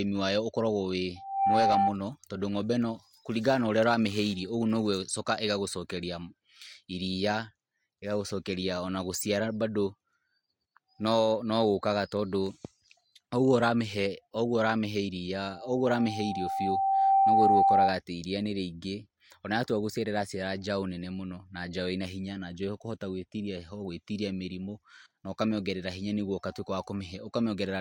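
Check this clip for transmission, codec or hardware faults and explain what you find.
There is loudspeaker feedback squeal, twice. From 1.16 to 1.97 s, a 780 Hz tone swells within a fraction of a second, sitting slightly above the speech. From 15.41 to 18.0 s, it builds over about two seconds and ends well above the speech. A microphone is picking up its own loudspeaker, and the loop gain at 780 Hz exceeds one.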